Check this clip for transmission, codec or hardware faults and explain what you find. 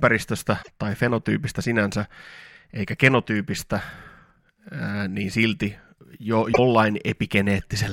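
Two faults are present, both damaged data in a compressed stream. They occur at 0.59 to 0.69 s, just before "tai fenotyypistä sinänsä", and at 6.49 to 6.59 s, just after "niin silti jo". Corrupted frames make the decoder misread them and hunt for the next header. The result is a brief burst of about 0.1 s. A dropout or a mechanical click would not show this frame-length disruption.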